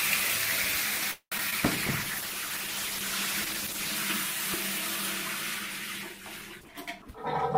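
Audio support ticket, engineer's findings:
Call audio freeze, 1.11–1.34 s: packets likely held in transit, jitter buffer ran empty. Receiver stretched the last sound into a fading buzz or hiss, then about 80 ms of silence. Playback resumed where it stopped, about 0.2 s later, with nothing missing.

Short concealed packet loss, 1.38–1.40 s and 1.50–1.54 s: about 20 ms of audio each time missed the decoder. Gaps filled by extrapolating the preceding sound and crossfading back, heard as two brief smears or wobbles just after the freeze.

Call bitrate drop, 1.60–4.03 s: bandwidth estimate fell, encoder pushed from 48 to 13 kbps, held at the floor for about 2.3 s. Coarser coding with high frequencies removed, so the sound turns rough, watery or muffled until the rate recovers.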